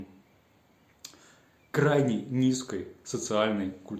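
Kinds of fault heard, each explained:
No faults can be heard anywhere in this audio.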